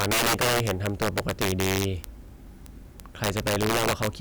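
Violent cracks, far harsher than clipping, break out on the loudest peaks of the speech throughout. This is integer overflow: peaks driven about 9 dB past full scale, a few percent of samples, wrap to the opposite sign instead of being limited.

From 0.13 s to 4.19 s, sharp ticks of uneven strength repeat steadily, about twenty per second. These are word clock ticks from an unlocked digital link drifting roughly 400 ppm, consistent with a single sample slipping at each tick.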